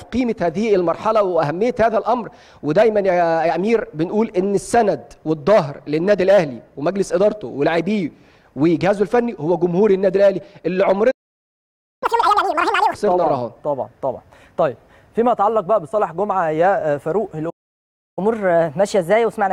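At 11.11 s the sound cuts out completely for about 0.91 s, until 12.03 s. This is a playback stall, most likely the player running short of buffered data or its output thread being held up. A dropout skips material. Here the audio resumes after the halt. The silence is also clean rather than a crackle or a burst of noise.

From 12.03 to 12.94 s comes catch-up at higher speed. The player rushes through its backlog at double rate, so the sound is both faster and pitched up by roughly ten semitones, then snaps back to normal. Speed and pitch rising together, and only right after a gap, separate this from a pitch-shift effect or tape wow, which would not be tied to a preceding silence.

The pattern repeats at 17.49 s, with a second stall of about 0.67 s ending at 18.19 s. From there to the end of the clip, a milder catch-up runs at 1.1 times speed, lifting the pitch by a semitone or two. Its onset exactly at the end of the silence gives it away.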